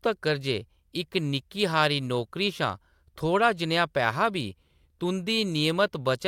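No technical faults can be heard anywhere in this speech recording. Nothing in the audio breaks, drops out or distorts at any point.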